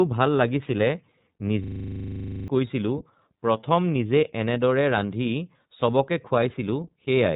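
From start to finish, iLBC codec coding band-limits the speech to below 3.8 kHz, fitting 30 ms frames at 13.33 kbps. The result is a rough, synthetic tone, and the spectrogram shows an empty band above that cutoff.

From 1.64 to 2.48 s, a system hang loop repeats one 40 ms slice about twenty times, producing a 25 Hz machine-gun stutter. On the waveform this appears as identical blocks tiled end to end, and roughly a second of audio is lost.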